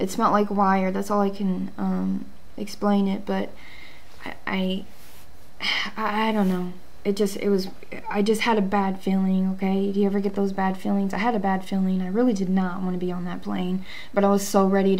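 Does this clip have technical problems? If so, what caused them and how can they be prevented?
No, the signal holds steady throughout, with no audible technical faults, so there is nothing that needs preventing.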